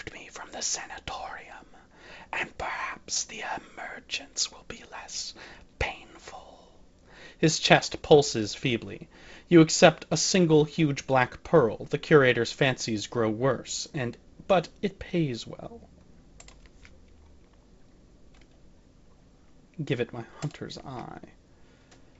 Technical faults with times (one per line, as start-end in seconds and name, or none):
none